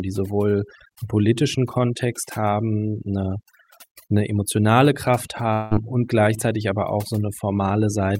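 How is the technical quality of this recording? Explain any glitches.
The recording has two clear problems. One runs through the whole clip. The other is a short break near the end.

Overdone noise removal affects the entire clip. A noise reduction stage was set too hard. It pushes individual frequency bands down whenever they sit close to its noise estimate. Quiet parts of the voice are caught along with the noise. The background drops and breaks up into twinkling specks.

From 5.53 to 5.74 s there is a gap of about 0.2 s, most likely a long network dropout. Audio stopped arriving for that stretch. The receiver kept the last sound going for about 175 ms, as a fading buzz or hiss, instead of leaving it silent. About 180 ms of the original speech never plays. The voice then resumes further on, with that piece missing.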